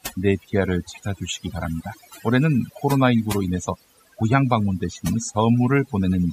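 From start to finish the speech carries overdone noise removal: a noise reduction stage was pushed too hard, shutting individual frequency bands down whenever they sank near its noise estimate, and softer parts of the voice were cut along with the noise. The pauses fall to near silence dotted with twinkling specks. A plain noise gate would mute everything at once, leaving no scattered tonal specks behind.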